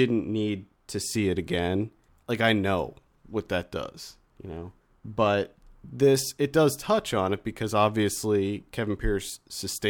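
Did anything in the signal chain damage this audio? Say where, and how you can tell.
No, nothing in this speech recording stood out on listening as damage from any stage of the signal chain.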